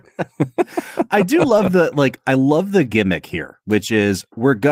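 From 1.41 to 1.71 s, between "I do" and "the like I love", several packets went missing and were each rebuilt from the low-bitrate copy carried in the next one, a lost packet rebuilt from error correction. About 160 ms of audio, consistent with eight 20 ms packets, comes out rougher and noisier, with no gap.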